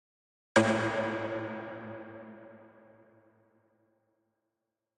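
No technical faults can be heard anywhere in the sound.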